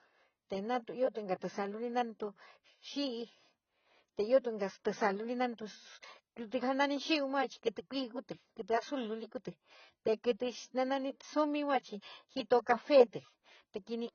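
Speech runs the full clip with AAC compression damage throughout, likely from low-bitrate AAC-LC encoding, which fits a rate around 16 kbps. Nothing reaches above 6.6 kHz, so sibilants sound dull and fizzy, and vowels warble as the encoder coarsely quantises each frame. On a spectrogram, energy stops at a hard horizontal ceiling near 6.6 kHz, with patchy holes and blocky, smeared texture below it.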